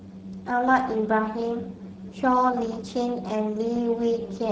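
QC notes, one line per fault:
throughout: Speex codec damage, plainly audible. The speech sounds hoarse and grainy, which fits a low Speex setting near 10 kbps that starves the CELP excitation of bits. A spectrogram shows smeared harmonics with noisy fill between them.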